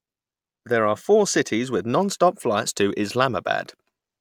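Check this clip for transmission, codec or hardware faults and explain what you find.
No transmission, codec or hardware faults.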